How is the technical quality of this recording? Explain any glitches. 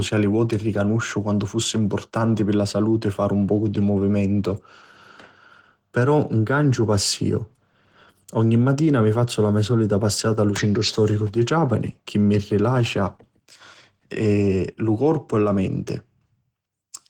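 The recording is marred by audible codec damage across all 17 seconds. Opus voice compression is at work: the low band is coded by linear prediction, the top by a transform layer, and the coarse excitation leaves the speech hoarse and faintly robotic. This fits a bitrate near 16 kbps.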